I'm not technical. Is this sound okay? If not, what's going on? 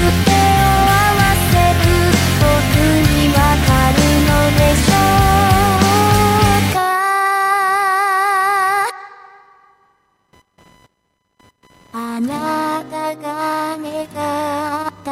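No. The computer's own activity is leaking into the audio through a shared electrical ground, which is called computer activity noise. Throughout the recording this adds a faint, high-pitched buzz, pulsing roughly a thousand times a second, that rises and falls with the computer's workload rather than with the sound.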